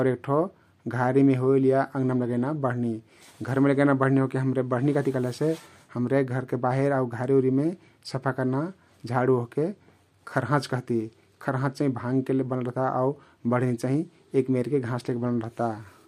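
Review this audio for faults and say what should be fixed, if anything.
Crude rate conversion affects the speech from start to finish: a faint gritty, inharmonic fizz, roughly 45 dB below the signal, tracks the louder and brighter syllables. The aliased pattern fits a 32 kHz to 48 kHz step done by unfiltered linear interpolation. Prevent it by resampling with a proper band-limited (polyphase or windowed-sinc) converter.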